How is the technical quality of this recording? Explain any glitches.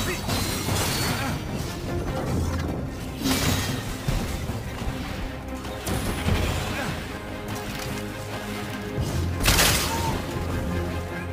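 The recording has one fault running through its whole length: sample clock jitter. The converter's clock wanders by something like 10 microseconds, so each sample is captured slightly early or late. Where the waveform changes fast, that timing error becomes an amplitude error, sitting only around 15 dB below the signal. It comes through as a grainy hiss riding on loud and bright passages, then falling away as the sound quietens.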